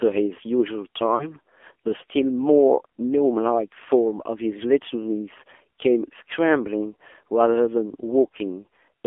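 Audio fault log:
Throughout: AMR narrowband mobile codec. The speech is confined to a telephone band of roughly 300 Hz to 3.4 kHz with nothing above 4 kHz, and sounds buzzy and synthetic, which fits a low rate near 7.4 kbps. Unlike plain band-limiting, the voice itself is remodelled into a coarse pulse-driven imitation.
1.16 to 1.28 s: lost AMR speech frames. For about 40 ms, which fits two lost 20 ms frames, the decoder repeats the previous pitch and vocal tract settings at falling gain, so the sound smears and dips rather than cutting to silence or clicking, then returns briefly weak.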